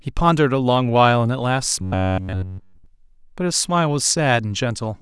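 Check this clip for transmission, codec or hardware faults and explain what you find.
There's one fault here. From 1.82 to 2.86 s you get robotic sound from repeated short buffers: the speech turns into a stiff metallic buzz pinned at about 93.8 Hz for that whole stretch. That's likely the player looping a roughly 10.7 ms chunk while fresh audio fails to arrive, so the real audio gets skipped.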